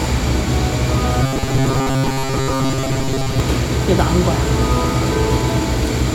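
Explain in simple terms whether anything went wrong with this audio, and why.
Robotic sound from repeated short buffers, from 1.23 to 3.4 s: the sound turns into a stiff, metallic buzz at 134 Hz. Fresh audio was likely arriving too slowly, so a tiny 7.5 ms scrap was replayed again and again, filling most of that stretch.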